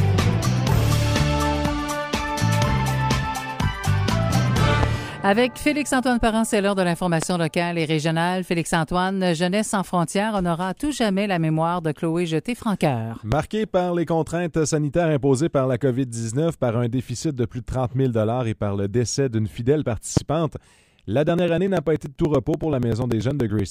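Single loud pops occur at 4.83–4.86, 7.22–7.25, 13.32–13.35 and 20.17–20.19 s, each a sharp transient peaking about 15 dB above the signal, with the sound continuing beneath. A voltage pulse from a plug, switch or static discharge is the likely cause.

From 21.29 to 23.59 s, periodic USB or driver dropouts produce regular ticks every 0.096 s. Each time, roughly 4 ms of audio is skipped outright, around thirty times in all, consistent with a background task repeatedly stalling the audio stream.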